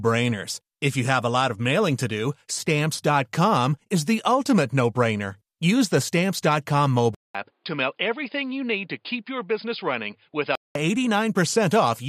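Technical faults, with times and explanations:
7.15 to 10.75 s, input switched to a poorer device: a 200 ms silence at the switch, then the speech turns dull with nothing above 5 kHz, drops about 5 dB and carries new noise about 50 dB down, likely from a narrower-band mic or headset call profile.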